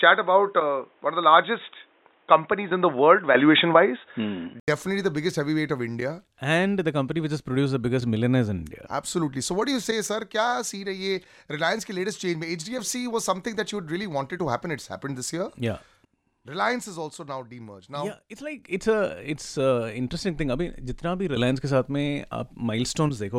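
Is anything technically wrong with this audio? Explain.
Yes. From 0.0 to 4.68 s the speech sounds dull and boxy, with nothing above 3.8 kHz, a faint new noise floor roughly 40 dB down, and a level a few dB different. An 80 ms gap follows before fuller sound returns, likely an input switched to a poorer device.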